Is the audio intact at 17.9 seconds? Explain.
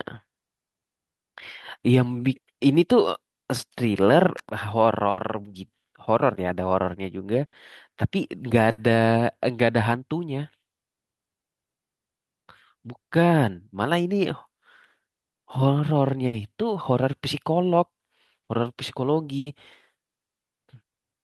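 Yes, the speech at 17.9 seconds is intact, with no audible fault at that moment.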